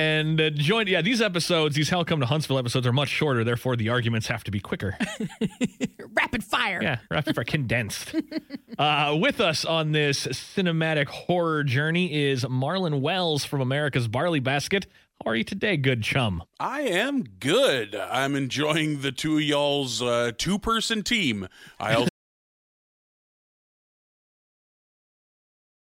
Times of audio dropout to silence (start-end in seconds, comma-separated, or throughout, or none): 22.09-25.97